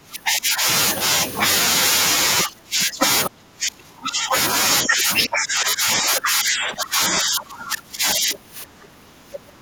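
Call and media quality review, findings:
Speech suppressed in double talk: echo canceller likely misjudging near-end talk as loudspeaker echo during overlap and attenuating both. Speech dips at 0.0–0.67 s, 2.44–3.06 s, 3.29–4.34 s, 4.84–5.11 s, and 5.27 s to end, deepest about 30 dB.

Other side's voice leaking through: residual loudspeaker echo likely not fully cancelled from the microphone path. Brief scraps of a second voice at 2.39 s, 2.81 s and 3.25 s, about 15 to 20 dB below the talker.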